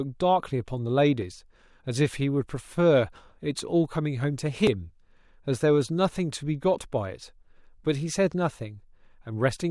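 At 1.22 s and 4.67 s, the speech jumps ahead past a short missing piece, likely a dropped buffer (overrun), leaving waveform discontinuities and thin vertical spectrogram stripes.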